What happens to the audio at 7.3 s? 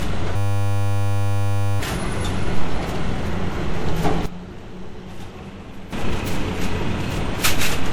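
At 7.3 s you're hearing generation loss that runs through the whole clip: swirly, hollow, smeared sound with blurred attacks, likely from around seven MP3 passes at about 96 kbit/s.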